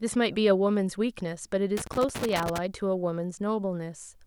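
A worn or dirty contact in the cable path starts making and breaking from 1.77 to 2.58 s, a loose connector crackle. The speech is chopped on and off, giving an irregular scratchy burst lasting about 0.8 s.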